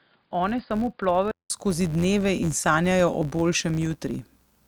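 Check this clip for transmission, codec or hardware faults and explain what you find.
Two faults are audible.

Throughout the clip, a filter restarted on every block resets its state, so each block opens with a small transient. That produces an 86.1 Hz buzz that rises and falls with the speech level, which fits a 512-sample buffer.

From 0.0 to 1.5 s, the input likely switched to a poorer device. The sound is dull, it is a few decibels quieter, and it carries a faint added noise floor. A 188 ms silence marks the change back to full bandwidth, just before "skozi dneve".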